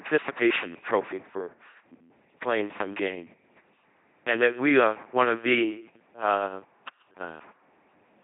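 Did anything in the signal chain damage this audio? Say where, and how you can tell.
Yes. The codec stage did the main damage. The whole clip is speech rebuilt by an LPC-10 vocoder, and the damage is heavy. Each moment is made either from a pulse train or from noise, shaped by a short all-pole filter. That gives a buzzing, mechanical robot voice throughout. Nothing is present above 3.8 kHz. The sound fits a 2.4 kbit/s LPC-10 link rather than a normal voice path.

There is also one loud pop from 0.895 to 0.92 s. It is a single sharp hit, about 5 dB above the speech, and the speech carries on underneath. A sudden voltage step or pulse entered the chain and was shaped by the circuits after it. The likely source is the analogue wiring or the driver: a plug, a switch, static, or a driver glitch.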